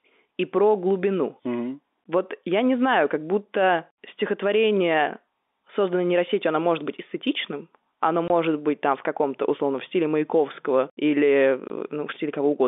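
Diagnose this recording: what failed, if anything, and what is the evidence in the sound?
The network stage failed, through packet loss filled with silence. The speech drops to dead silence twice, from 8.28 to 8.30 s and from 11.68 to 11.70 s. Each gap lasts 20 ms, which fits one lost 20 ms packet. The receiver had nothing to play for that slot and inserted zeros. The edges are abrupt. The narrow telephone band of the G.711 coding carries on unchanged around the gaps.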